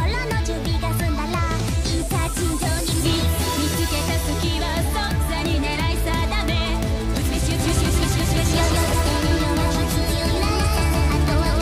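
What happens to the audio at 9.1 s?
At 9.1 s the sound is heard twice: every event is followed by an identical, equally loud repeat about a fifth of a second later, dry and without any room tail. This doubled audio track begins abruptly at 7.60 s and runs to the end of the clip. The likely cause is the same signal being mixed in a second time through a slower path, or an edit leaving two copies out of step.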